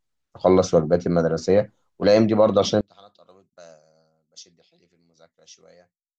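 At 2.81 s the speech suddenly drops by about 29 dB and stays low to the end of the clip. What remains is a faint copy of the voice. This points to one channel inverted. One stereo channel has likely had its polarity flipped. When the two channels are summed to mono, the centred voice cancels. Only the small difference between the channels survives as a faint trace.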